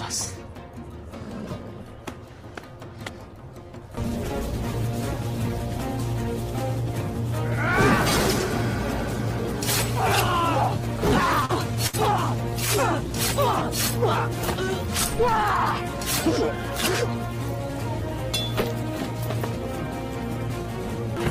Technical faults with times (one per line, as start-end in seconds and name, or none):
11.45-11.51 short concealed packet loss
11.87-11.95 burst of packet loss